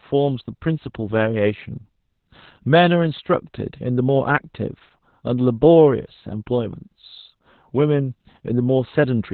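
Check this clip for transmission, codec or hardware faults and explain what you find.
The whole clip shows one fault, Opus voice compression. Throughout, the speech has nothing above 4.4 kHz and sounds muffled, hoarse and slightly robotic, which fits Opus running its SILK coder in narrowband mode at around 8 kbps. SILK models speech as a predictive filter plus a coarsely coded excitation, so the buzzy roughness is what separates it from a simple low-pass or telephone-band filter, which would only dull the sound.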